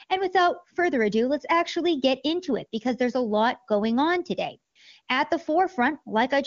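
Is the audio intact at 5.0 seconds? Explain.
No. From 5.01 to 5.07 s there is a burst of AMR comfort noise. For about 60 ms no speech frames were sent. The receiver filled the gap with synthetic noise built from a rough level and spectrum estimate. The real background briefly becomes smooth, steady hiss.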